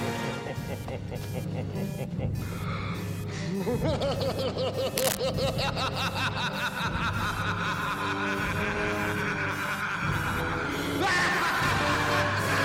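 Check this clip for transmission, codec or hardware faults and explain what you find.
One hardware fault appears. Cable scratch noise runs from 4.97 to 5.17 s, a dense, ragged rustle about as loud as the sound itself. Its likely cause is a worn cable or connector whose contact resistance flickered as it moved. Unlike a single click, it is a fast, irregular cluster of bursts.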